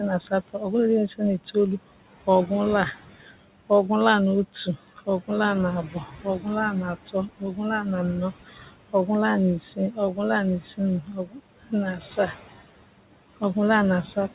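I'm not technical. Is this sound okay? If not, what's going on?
No. There are noise suppressor artifacts throughout the speech. A noise suppressor is a filter that tries to remove background hiss by turning down whatever it judges to be steady noise, moment by moment. The room noise therefore keeps dropping away between words and rising back up under them.

There is also speech cut by the noise suppressor, from about 0.3 to 12.3 seconds and again from about 13.4 seconds to the end. Here the filter mistakes parts of the speech for background noise and turns them down too. Soft consonants, word endings and quieter moments sound swallowed or faint. In the first stretch this adds up to about two seconds of speech. The dips are strongest there and milder near the end.

The room's own background noise and the phone-line-quality sound of the call connection are expected and are not faults.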